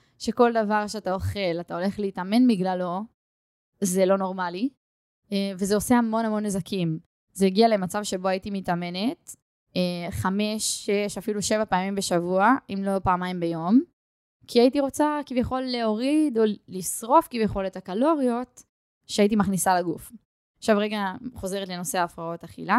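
Listening closely to this speech recording, nothing technical stood out as wrong.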